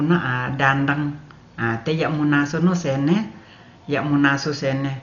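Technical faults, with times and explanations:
Throughout, Dolby Digital compression: a starved encoder, likely at a bitrate near 40 kbps, dropped everything above 6.9 kHz and left many frequency lines without mantissa bits, filled by dither noise, so the speech sounds dull and heavily damaged, with rough, fluttering noise.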